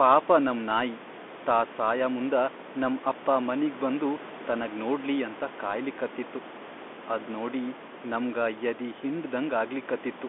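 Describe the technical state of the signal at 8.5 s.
At 8.5 s the speech carries Bluetooth CVSD headset codec damage, present throughout the clip. A one-bit delta coder's adaptive step lags loud high sounds, leaving scratchy s sounds over a granular hiss, all confined to a 250 Hz to 3.5 kHz band. Plain band-limiting would sound narrow but clean, not gritty.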